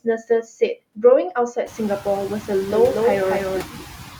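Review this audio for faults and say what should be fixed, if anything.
Noise suppressor artifacts run through the whole recording. The suppressor pulls down the frequency bands it judges to be steady noise by about 14 dB, frame by frame, so the background dips in the gaps and swells back under the talker. This moving residue is what separates it from plain room noise, which stays even and does not breathe with the speech. The room noise itself grows by about 19 dB near 1.5 s, which gives the suppressor more to chew on.

Speech cut by the noise suppressor happens at two points: between 0.04 and 0.76 s, where roughly 150 ms in total is pulled down by as much as about 14 dB, and between 3.63 and 3.99 s, where roughly 300 ms sinks by as much as about 16 dB. The suppressor treats quiet parts of the speech as noise and lowers them together with the background, so those parts sound swallowed or faint. 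Unlike a dropout or a gate, the sound never cuts to silence. It fades only in the low-level parts of the speech.

To prevent both faults, reduce the suppression depth or make the noise estimate adapt more slowly and protect speech, and lower the room noise at the source so that less aggressive processing is needed.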